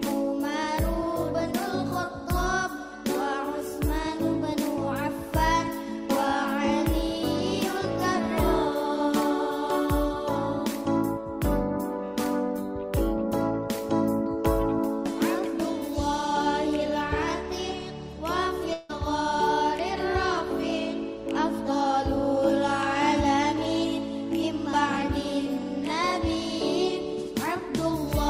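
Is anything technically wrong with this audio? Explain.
Yes. From 18.73 to 18.91 s there is a long network dropout. The audio likely stopped arriving, so the last sound stretches into a fading buzz, then resumes with material missing. A brief packet glitch would sound like a click instead.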